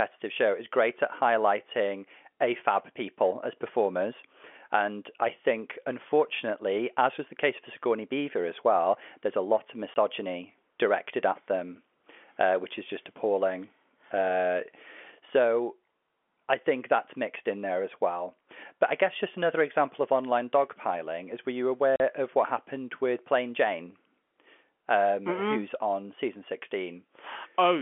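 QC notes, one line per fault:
9.94–9.96 s and 21.96–22.00 s, packet loss filled with silence. Sound cuts out after "lot of", then after "dogpiling is were you". Gaps of 20 and 40 ms fit one and two lost 20 ms packets. Their edges are hard.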